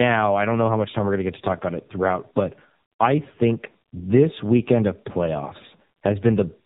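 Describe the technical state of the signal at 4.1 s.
At 4.1 s the speech shows tandem speech coding. The fault runs through the whole clip, not just this moment. The sound appears to have passed through two low-rate speech coders in a row, which fits an iLBC stage followed by AMR-NB at about 7.95 kbit/s. The second coder re-encoded the first one's already damaged output, so the errors stack. The result is rough, muffled and warbly, with nothing above 3.8 kHz.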